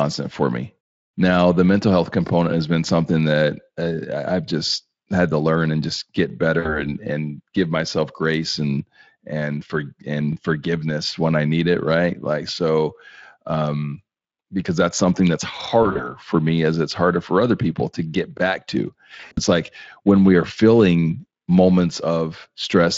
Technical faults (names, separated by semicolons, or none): VoIP packet loss concealed by the speech codec; overlapping chunks